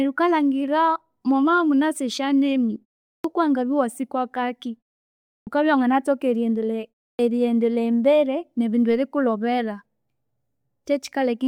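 Speech with a clipped start after a pause: the output device drops into a low-power state during short silences and needs time to wake before playing. At 3.20 s, after a 0.43 s pause, about 44 ms is lost. At 5.43 s, after 0.69 s of silence, about 39 ms goes just before "iwanganathoka eriyendeleya". At 7.15 s, right after that phrase and a 0.3 s pause, about 40 ms is lost. Each time, the sound bursts in abruptly without its opening.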